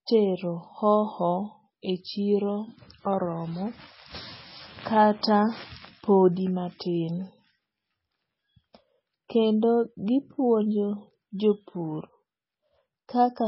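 From start to finish the speech has that watery, swirly quality of heavy MP3 compression, likely from a very low bitrate, something like 16 kbps. Nothing comes through above 5.6 kHz, so s sounds go dull and chirpy, and weak detail flickers in and out.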